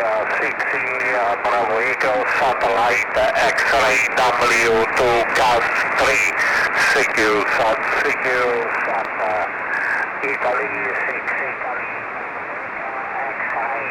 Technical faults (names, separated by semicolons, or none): none